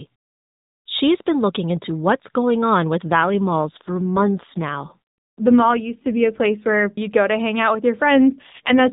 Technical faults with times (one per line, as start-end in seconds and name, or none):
3.06-6.91 AMR rate drop
8.16-8.88 AMR rate drop